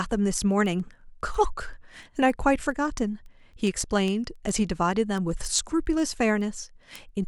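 A receiver running on its own clock, roughly 150 ppm off the sender's, drops or repeats one sample each time the clocks slip past each other. The result is word clock ticks from 0.11 s to 7.23 s: around fifty sharp clicks of uneven strength, recurring about every 0.15 s through the speech.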